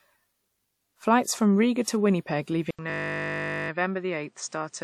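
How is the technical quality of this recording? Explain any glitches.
Two glitches affect the second half of the recording: a device change and a stuck audio loop.

From 2.71 s to the end, the input was likely switched to a poorer device. A gap of about 80 ms marks the change. Afterwards the speech is dull with nothing above 9 kHz, roughly 5 dB quieter, and carries new background noise about 40 dB below the voice.

From 2.9 to 3.7 s, a system hang loop occurs. The computer or driver froze while the audio hardware kept replaying one 20 ms buffer, 40 times over. The repeats fuse into a steady 50 Hz buzz in place of the speech.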